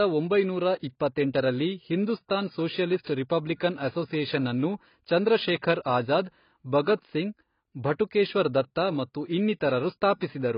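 Throughout the speech, the sound is heavily damaged by what is likely AAC compression at a low bitrate, around 16 kbps. Nothing remains above 5.1 kHz, so the audio is dull and smeared. Unlike a simple low-pass filter, it also warbles and fizzes on sibilants.

At 1.36 to 1.38 s, a single loud pop, likely from a voltage spike, lands roughly 10 dB above the speech. Unlike a dropout or click from lost data, the speech carries on unbroken underneath the sharp pop.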